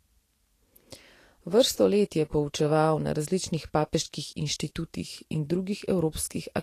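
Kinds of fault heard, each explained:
Vorbis compression: The speech runs hissy and grainy from start to finish, and the damage is plainly audible. The likely cause is low-rate Vorbis coding, and the sound fits a bitrate near 38 kbps. Vorbis keeps a smooth outline of the spectrum and spends few bits on the detail above it. Fine treble detail is replaced by noise of similar strength. Tones sound rough, and the starts of sounds are blurred.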